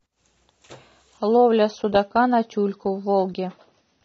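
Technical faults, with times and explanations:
1.17 s to end, adaptive stream at a lower bitrate: codec artefacts suddenly rise as the stream switches to a leaner encoding, which fits a drop from 96 to 24 kbit/s AAC. A spectrogram shows an abrupt change; the waveform has no gap.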